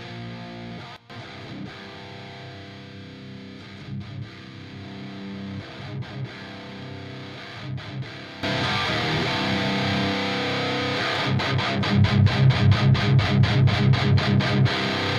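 At 0.96 s the level drops about 16 dB for 0.13 s, and from 8.43 s to the end it rises about 14 dB. Both are sudden gain jumps, likely a digital gain change applied without a ramp. Sound and background noise shift together instantly, unlike a gradual fade.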